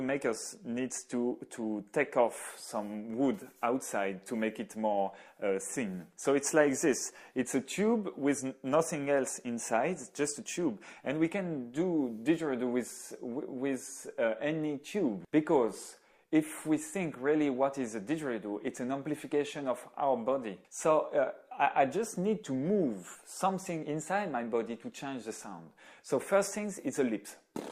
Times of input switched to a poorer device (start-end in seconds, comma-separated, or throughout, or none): none